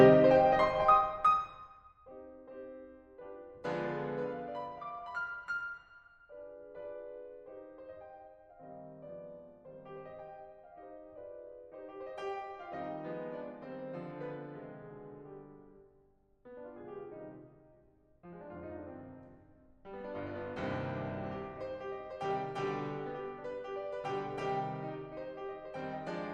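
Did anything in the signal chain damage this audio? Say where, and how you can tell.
No, nothing in the signal chain has damaged this music. Where the level rises or falls, it moves gradually, the way a fader ride should.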